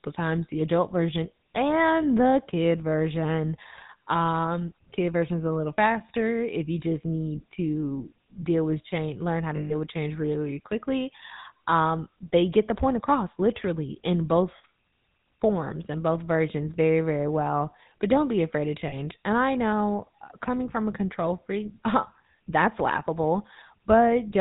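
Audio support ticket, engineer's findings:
GSM full-rate codec, whole clip. Buzzy, gravelly roughness on all speech, nothing above 4 kHz. Vocal-tract model driven by regular pulses, only every third excitation sample kept. Damage plainly audible; fits 13 kbit/s full rate.

Lost GSM frames, three events. 9.56–9.74 s, after "with change learn how", before "with change really quickly". 14.58–14.65 s, after "point across literally in". 18.88–18.94 s, after "don't be afraid of". Rough metallic ring held in place. Decoder repeating last good frame. Longest gap 140 ms, fits about seven 20 ms frames.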